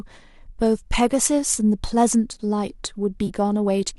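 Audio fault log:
1.54–1.57 s and 3.27–3.29 s, AAC frame loss with concealment: two brief smeared, phasey blips in the speech, each fitting about 20 ms of missing audio, likely from the low-delay AAC stream. The decoder patches each gap by reusing the last good spectrum with shuffled phase, so you hear a noisy, blurred fill rather than a dropout to silence.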